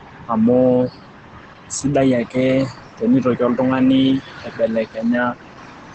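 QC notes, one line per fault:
Throughout: Opus voice compression. The sound is band-limited with nothing above about 8.7 kHz, which fits Opus running its SILK linear-prediction coder in wideband mode at roughly 12 kbps with 20 ms frames. At that rate the excitation is coded coarsely, so the speech comes out muffled and hoarse, with a faint robotic texture. The missing top band removes sibilant detail, and the codec damage is plainly audible.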